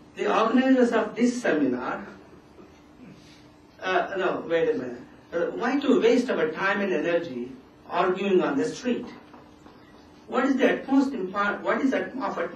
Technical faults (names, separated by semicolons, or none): none